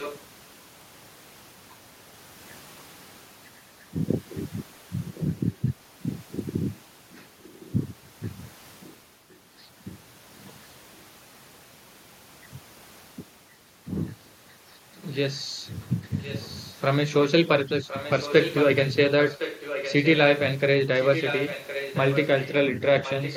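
Speech with an echo leak at 0–0.21, 5.08–7.73, 8.81–9.4, 16.2–16.72, 17.88–20.39 and 20.99–23.37 s. A faint-to-fairly-strong copy of the voice returns about 1.06 s later, likely from a far-end loudspeaker whose echo canceller let it through. Unlike room reverberation, it is a distinct delayed repeat rather than a smeared tail.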